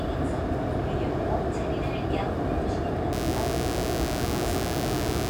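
From 3.13 s to the end at 5.30 s, a mains buzz rides under the sound, sitting fairly prominently, not far below it. Sharp switching spikes, of the kind a dimmer or rectifier produces twice per cycle of a 60 Hz supply, have leaked into the signal path, filling it with harmonics up to several kHz. What separates it from plain hum is texture: a steady, raspy, edged buzz rather than a smooth, low drone.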